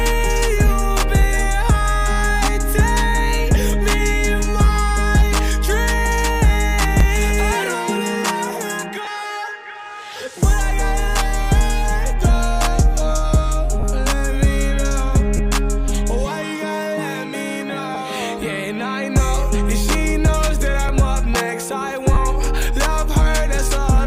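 The audio carries two kinds of fault. A repeated buffer occurs at 7.00 s, 15.89 s and 20.89 s: each time a block of about 5 ms was played one extra time because fresh audio arrived late, with hardly any audio dropped. With a buffer this small the repeat is heard as a click or brief buzz. A waveform shows the same 5 ms shape twice in a row with a hard step at the join, and a spectrogram shows a thin vertical broadband line. The second fault is lost LE Audio frames, at 9.05 to 9.07 s (20 ms), 13.80 to 13.83 s (30 ms), 15.37 to 15.39 s (20 ms), 17.95 s (10 ms) and 22.14 to 22.17 s (30 ms). The timing points to lost 10 ms Bluetooth frames, which the LC3 decoder filled by reusing the last spectrum with scrambled phases. Any tonal content there becomes a brief noisy smear. On a spectrogram the harmonic lines break into a diffuse noisy patch for that span, and the waveform loses its regular periodic shape.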